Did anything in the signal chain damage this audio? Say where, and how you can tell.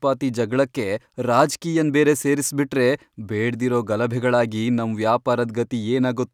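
No, nothing along the chain, from capture through to playback, audibly damaged this speech.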